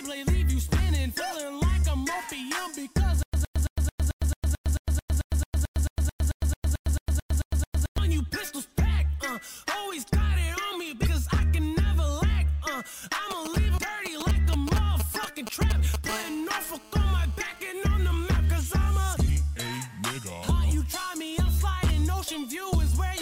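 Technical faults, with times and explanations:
3.23–7.98 s, stutter with silent gaps: the same 112 ms fragment repeats 21 times, each followed by about 108 ms of digital silence, giving an even stutter every 220 ms. The likely cause is a stalled player or stream that replays its last buffer at each retry and then runs dry, so the audio due in that span is lost. The waveform shows identical blocks separated by flat silent gaps, and the spectrogram shows matching columns with blank strips between.
11.03–11.07 s, 13.77 s and 19.26–19.30 s, damaged data in a compressed stream: each is a brief chirp, squawk, click or short hole where corrupted bytes make the decoder misread frames, lose sync and hunt for the next frame header. On a spectrogram each appears as a narrow vertical smear of broadband or oddly tonal energy that breaks the surrounding pattern. The waveform shows a short burst of garbage or an abrupt discontinuity.
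13.31–16.11 s, GSM signalling bursts: a galloping dit-dit-dit of short raspy buzzes at 216.7 Hz, only a few decibels below the programme. A nearby 2G phone is exchanging short groups of radio bursts with the network, and the audio circuitry rectifies them into sound. The spectrogram shows clustered vertical stripes with a comb of harmonics at 217 Hz spacing. The waveform shows grouped spiky pulse trains unrelated to the signal.
16.11–17.67 s, GSM phone buzz: the bursts become continuous, giving a steady, hard buzz at 216.7 Hz about 17 dB below the signal. This is the phone transmitting 217 times a second during a call, with each radio pulse rectified into the audio path. On a spectrogram it appears as an unbroken ladder of horizontal harmonic lines spaced 217 Hz apart, reaching high in frequency. The waveform carries a regular pulse train at about 4.6 ms intervals.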